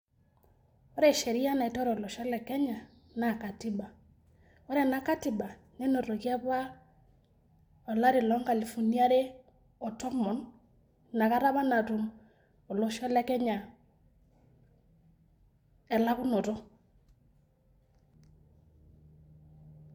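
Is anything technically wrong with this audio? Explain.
No, nothing technically wrong turns up here; this speech recording comes through without any faults to point out.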